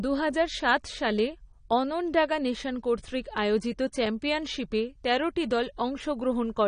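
Speech that carries AAC compression throughout, with nothing above about 9.8 kHz, so it sounds dull, and sibilants turn fizzy and warbling, which fits around 32 kbps. That swirling texture, rather than a clean roll-off alone, marks it as likely a low-bitrate AAC-LC encode and not simple filtering.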